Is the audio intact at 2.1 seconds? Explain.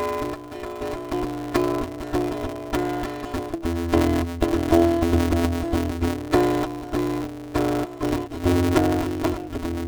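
No. At 2.1 seconds the music carries planar audio read as interleaved, a fault present throughout. Each roughly 5.8 ms block, which fits a 256-sample block, is replayed as left-then-right halves at double speed, giving a robotic buzz near 172 Hz. Unlike a sample-rate mismatch, pace stays unchanged and there is no clear octave shift.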